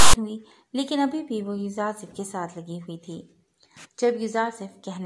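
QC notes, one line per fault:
0.00–0.14 s, file tags played as audio: a harsh rasp, offset to one side, with hard edges at the very start, where a block of text tags is decoded as samples; unlike a click or noise burst, its buzzy texture comes from the narrow range of byte values that text characters use.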